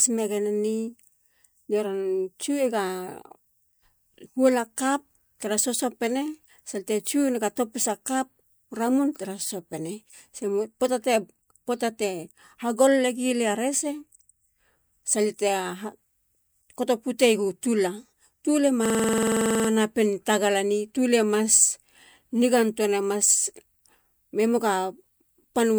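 System hang loop from 18.86 to 19.69 s, after "tula tule": the system froze while the audio hardware kept replaying its ring buffer, so a 46 ms slice repeats about 18 times at 21.5 Hz, a buzzy stutter fitting a 2048-sample buffer, before "tagalane tule mas" resumes with essentially nothing lost.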